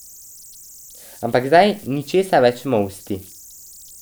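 Throughout the speech, converter idle tones sit about 26 dB below the signal: an undithered delta-sigma converter locks into repeating bit patterns at low levels, producing tones around 7 kHz heard as whistles, buzzy chirps or rough hiss in pauses. On a spectrogram this appears as a thin horizontal line.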